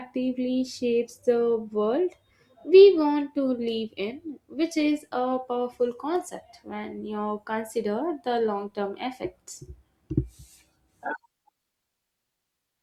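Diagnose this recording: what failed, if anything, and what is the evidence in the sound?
Nothing failed in this recording.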